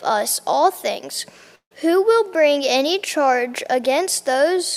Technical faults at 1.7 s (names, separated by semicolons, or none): long network dropout